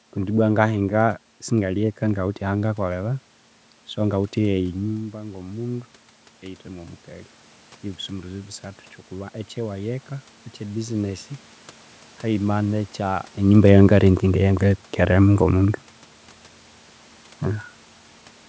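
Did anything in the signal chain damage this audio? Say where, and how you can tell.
Yes. Automatic gain rising in the call processing: from 4.81 to 7.38 s, the waveform envelope and the background noise floor swell together by about 5 dB, compensating for a much quieter input.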